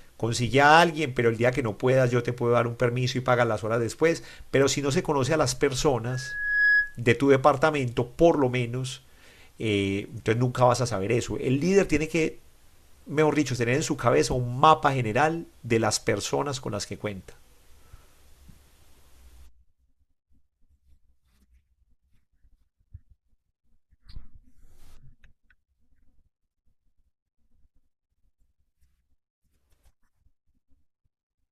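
From 6.11 s to 6.99 s a pure tone near 1.7 kHz swells over about half a second into a squeal that rises a few decibels above the speech. This is loudspeaker feedback squeal: the microphone picked up its own loudspeaker, and loop gain exceeded one at that frequency.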